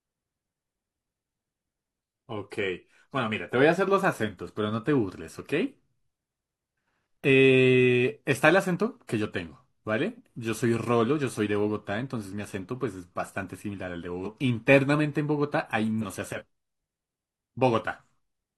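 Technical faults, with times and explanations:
14.21–14.27 s and 15.98–16.03 s: damaged data in a compressed stream. Corrupted bytes leave the decoder misreading frames and hunting for the next valid header, so each brief spot breaks the speech with a short glitch. On a spectrogram it appears as a short disruption interrupting the speech harmonics, and on the waveform as an abrupt discontinuity.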